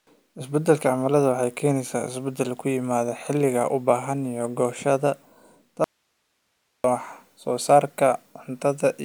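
At 5.84 s the speech cuts out abruptly for about a second, until 6.84 s, leaving only faint hiss roughly 50 dB below the signal. That's an audio dropout to a faint residue, likely the feed breaking upstream while the path after it stayed live.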